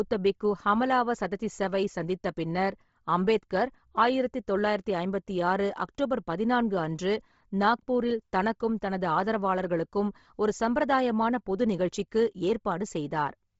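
Bluetooth LC3 compression runs through the whole clip, from start to finish. The speech has a heavy grainy, breathy edge, and nothing sounds above about 7.7 kHz. The likely cause is LC3, the transform codec of Bluetooth LE Audio, at a low rate. Starved of bits, it discards much of the upper spectrum and patches it with noise. The damage points to roughly 24 kbps with short 7.5 ms frames.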